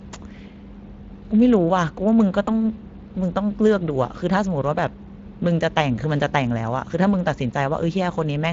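Speex codec damage runs throughout. This CELP coder, at a rate that fits roughly 20 kbps, models the excitation coarsely, leaving plainly audible grain on the speech. VoIP packet loss concealed by the speech codec follows at 2.45 to 2.50 s. The gap points to a single lost 20 ms frame, which the decoder filled by extending its last pitch and filter into a brief, fading buzzy tone or coloured noise.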